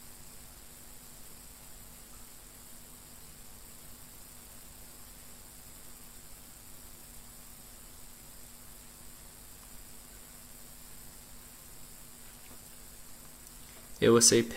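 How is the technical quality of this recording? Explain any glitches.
The recording carries a persistent mains buzz from start to finish. A dimmer, rectifier or unshielded lead is letting switching spikes from the 50 Hz supply into the signal path, twice per cycle, so harmonics of 50 Hz stretch up to several kHz. The result is a steady, raspy buzz, about 25 dB below the wanted sound.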